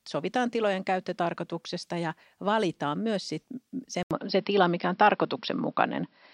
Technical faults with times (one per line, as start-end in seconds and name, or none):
4.03-6.34 input switched to a poorer device